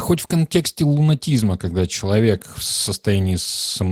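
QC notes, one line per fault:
Throughout: Opus voice compression. The speech sounds plainly coded, with a muffled, slightly hoarse and faintly robotic quality. Its character fits a low bitrate of around 16 kbps in hybrid mode. A linear-prediction coder carries the band up to 8 kHz, and a thin transform layer supplies the top of a fullband signal. With so few bits, the excitation is coded coarsely and the upper band is only roughly sketched, which accounts for the dull, rough texture.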